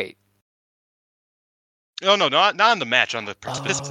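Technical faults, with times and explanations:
3.57–3.80 s, frames out of order: two neighbouring 104.5 ms blocks got swapped, so this bit of speech flutters garbled.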